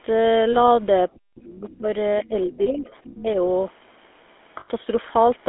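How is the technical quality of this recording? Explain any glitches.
The quality is poor. It is a degraded phone-call recording with codec damage throughout and several timed glitches.

GSM full-rate codec: The speech was squeezed through a vocal-tract model driven by sparse, regularly spaced pulses, with the line band held to about 250 Hz to 3.5 kHz, which fits the 13 kbps full-rate GSM codec. The result is a plainly buzzy, gravelly roughness over the whole voice, with no air above 3.5 kHz.

Lost GSM frames: At 0.52–0.57 s, 2.62–2.69 s and 4.60–4.69 s, damaged frames (20 ms, 40 ms and 80 ms) were filled by repeating the last good frame. Each gap comes out as a brief rough, metallic ring where the sound should be.

Speech suppressed in double talk: From 1.07 to 1.87 s, 2.20 to 2.87 s and 3.04 to 3.37 s, the echo canceller likely mistook simultaneous talk for echo and turned the line down. 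The talker dips and drops out in pieces, by as much as about 40 dB in the first stretch.

Other side's voice leaking through: At 1.37–1.43 s and 1.71–1.78 s, loudspeaker sound likely escaped the echo canceller into the microphone. Faint scraps of a second voice come through, roughly 25 to 30 dB below the speech.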